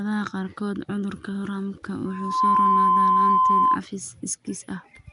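Nellymoser compression, throughout: the speech carries a rough, hissy halo and a smeared, underwater quality, with nothing above 10.6 kHz, plainly audible damage that likely comes from the Nellymoser Asao codec, at a rate that fits about 44 kbps. Its fixed two bits per sample leave weak bands empty, and those are filled with noise.

Loudspeaker feedback squeal, from 2.05 to 3.78 s: a microphone is picking up the loudspeaker it feeds, so the loop gain exceeds one at 1 kHz. That single tone swells over a few tenths of a second into a squeal roughly 10 dB above the speech, then holds until it stops.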